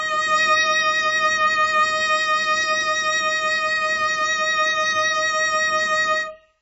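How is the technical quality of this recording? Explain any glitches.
The technical quality is poor. The music is heavily damaged by lossy coding from start to finish.

The fault is AAC compression, likely from AAC-LC at a very low rate. It runs throughout. Nothing is heard above 7.7 kHz, which fits a bitrate near 16 kbps. With so few bits, the encoder drops the top band entirely. It also quantises the remaining frequency lines coarsely. The music sounds dull and smeared. Sustained tones warble, and the upper content has a fizzy, grainy texture.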